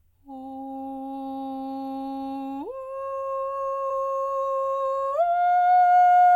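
At 3.9 s the music jumps ahead as compressed frames are skipped, a few frames or about a tenth of a second.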